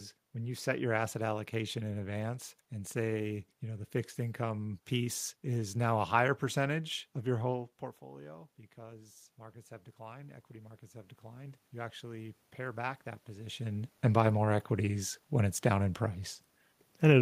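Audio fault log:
7.59–13.57 s, automatic gain rising: after the input falls about 18 dB, gain slowly climbs about 10 dB, so room noise swells along with the voice, unlike a talker simply moving closer.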